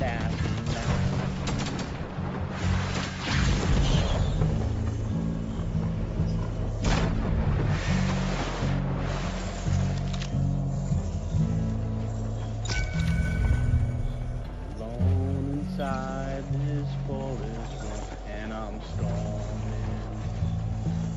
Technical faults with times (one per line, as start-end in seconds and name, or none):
13.01-15.91 imaging from linear upsampling